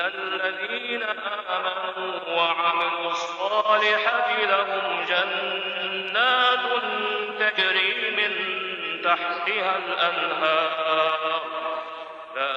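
Damaged data in a compressed stream shows up twice, as very short blips at about 4.11 s and 7.57 s. At each point part of the encoded stream is wrong, through lost, zeroed or overwritten bytes, so the decoder cannot read the affected frame correctly. It produces a brief burst of garbled output, loses its place in the stream and has to search for the next valid frame header before normal decoding of the audio resumes.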